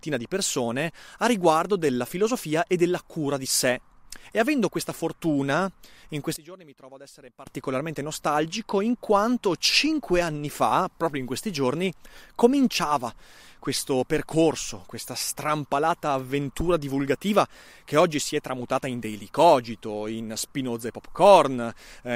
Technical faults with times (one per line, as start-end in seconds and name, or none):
6.36-7.47 one channel inverted